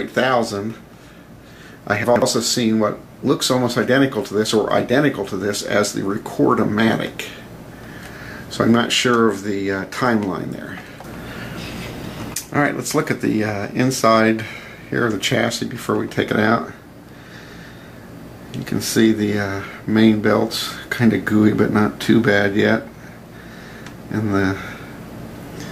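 At 2.04 s a short run of audio plays with its chunks out of order, lasting until 2.22 s. A 60 ms chunk arrived late and was played two chunks after its proper place, so the two chunks that should follow it come first. Nothing is missing, but the sequence is scrambled across those 180 ms, with three hard joins between misplaced chunks, making the sound briefly jumbled before normal order resumes.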